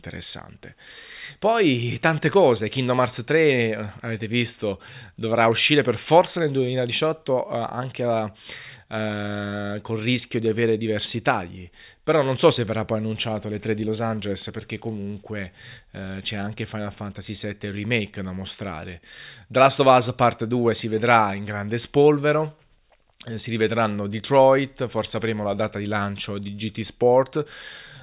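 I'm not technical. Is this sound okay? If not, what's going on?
Yes, nothing in this speech recording points to a technical fault.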